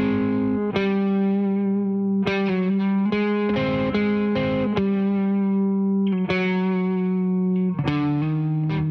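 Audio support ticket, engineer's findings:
Engineer's findings: no fault found in the music clip.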